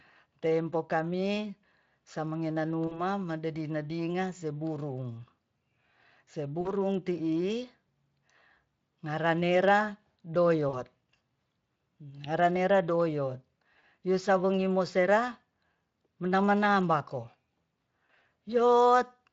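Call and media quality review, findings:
VoIP packet loss concealed by the speech codec: brief buzzy, smeared holds at 2.87–3.01 s (before "madedi nadinga seburung"), 6.61–6.72 s, 10.69–10.80 s and 13.79–13.85 s (before "pwusawongi mosera"). Each gap is about 40 ms, which fits two lost 20 ms frames. Near 18.05–18.26 s, about 120 ms is lost in bursts scattered over 200 ms, with no run longer than 40 ms. The decoder repeats its last pitch and filter at falling gain, and the weakness persists after recovery. Unlike a plain dropout, the gap holds a fading tone instead of silence or a click. The light Speex coding elsewhere stays steady.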